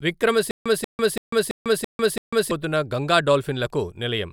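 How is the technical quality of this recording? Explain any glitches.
The recording has one clear glitch, a stutter with silent gaps running from 0.51 to 2.51 s. A 0.19 s fragment of speech plays, then 0.15 s of dead digital silence follows, and the pair repeats six times at an even 0.33 s period. The likely cause is a stalled player or stream that replays its last buffered fragment at each retry and then runs dry. Unlike a plain dropout, the same sound repeats, and the speech that should have filled those two seconds never arrives.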